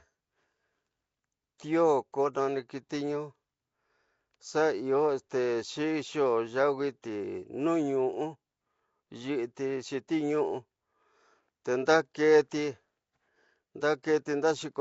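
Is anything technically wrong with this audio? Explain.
Yes, the whole speech clip carries Nellymoser compression, likely from Flash's old Nellymoser Asao codec, at a rate that fits about 32 kbps. With so few bits, weak bands are filled with noise, giving a rough, hissy, underwater smear, and nothing survives above 7.7 kHz.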